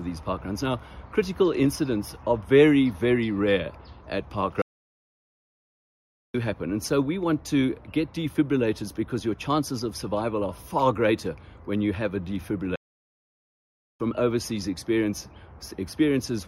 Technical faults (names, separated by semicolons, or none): playback stall